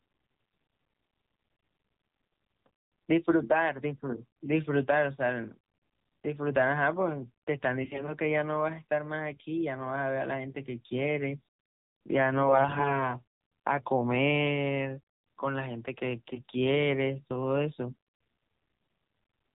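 Throughout, the speech sounds muffled, buzzy and synthetic, with nothing above 4 kHz. This is the AMR narrowband mobile codec at a low rate, which fits its 7.4 kbps mode. From 7.82 to 8.08 s, 12.42 to 13.10 s and 17.90 to 17.95 s, the voice keeps its pitch and level but turns hoarse and gargly. These are AMR bit errors: a few percent of the less protected bits arrived flipped, misplacing the excitation pulses and skewing the fine parameters.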